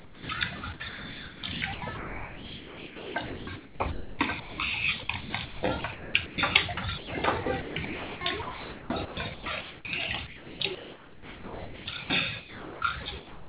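From 0.0 to 0.29 s, the opening is lost to sound dropped by the voice detector. About 290 ms is comfort noise in place of the real sound. The sender's detector likely misjudged the onset as background and stopped transmitting until it retriggered.

Later stretches of the audio are sound chopped by the voice detector, with the detector likely switching on and off repeatedly. It happens from 0.59 to 4.58 s (about 2.9 s replaced), 5.03 to 6.38 s (0.72 s), 6.74 to 7.13 s (0.18 s), 7.43 to 9.85 s (1.5 s), 10.27 to 12.10 s (1.5 s), and 12.40 to 13.48 s (0.75 s). Quiet stretches and edges drop into comfort noise, so the sound breaks up. Throughout, nothing is heard above 4 kHz.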